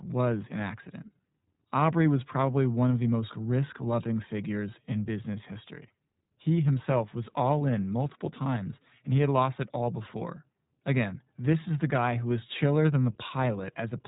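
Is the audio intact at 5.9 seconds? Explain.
No. At 5.9 seconds, as across the whole clip, the speech is shaped by the iLBC codec. Each 20 ms frame's excitation is coded independently, which fits the 15.2 kbps mode. Nothing passes above 3.8 kHz, so the speech sounds dull, slightly rough and plainly synthetic.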